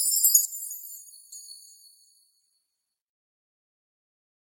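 From 0.45 s to 1.32 s the sound drops by about 12 dB, with only a faint residue left. This points to one channel inverted: with one side of the stereo pair in reversed polarity, anything common to both channels cancels when they are folded to mono, and only the small difference between them survives. That is the likely cause.

At 0.95 s, inside that stretch, a brief blip cuts through. This is damaged data in a compressed stream. Corrupted bytes left the decoder unable to read the frame correctly, so it lost sync and searched for the next valid frame header, producing a short burst of garbled output instead of the intended signal.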